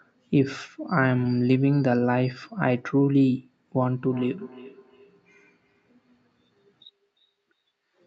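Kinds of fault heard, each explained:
Feedback echo between two devices: From about 4.06 s to the end, the speech comes round again at a steady spacing of roughly 400 ms, each repeat thinner and more ringing, reaching about 24 dB below the direct sound. A second device in the same room plays back what this microphone sent, and the microphone picks it up again. The echo canceller only removes what its own device plays, so this loop gets through.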